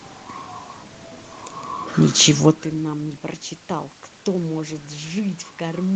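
No technical faults are present: the band-limited call audio carries nothing above 8 kHz, the room's background noise stays in the recording, and the level shift around 2.5 s comes from the talker moving relative to the microphone, not from the signal chain.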